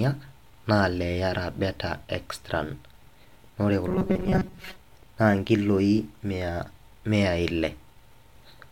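From 3.88 to 4.77 s, new audio likely arrived too seldom, so playback looped a short buffer for roughly half the time. This robotic sound from repeated short buffers turns the speech into a rigid metallic buzz at 188 Hz, fitting a buffer of about 5.3 ms.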